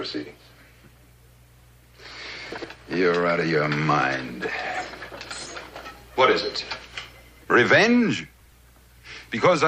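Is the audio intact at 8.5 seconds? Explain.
No. From 8.40 to 8.52 s the sound briefly jumbles. The chunks are out of order: one 60 ms chunk plays a chunk late, creating hard joins.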